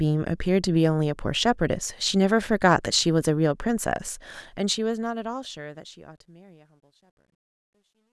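From 4.22 s to the end at 8.13 s, the speech fade-out shows truncation distortion. The gain stage, which fits a 12-bit path without dither, steps the waveform into coarse squares, worst from 6.35 s, where it turns gritty. Spectrograms show broadband hash bursts.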